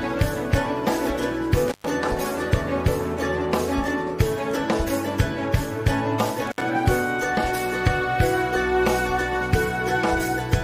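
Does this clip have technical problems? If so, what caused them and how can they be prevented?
Yes. An intermittent contact, a loose cable or plug briefly losing connection, breaks the signal twice: from 1.68 to 1.89 s, opening for 118 ms, and from 6.47 to 6.62 s, opening for 63 ms. Each time the sound drops out with crackle as the contact breaks and remakes. Seating connectors firmly and replacing worn cables prevents this.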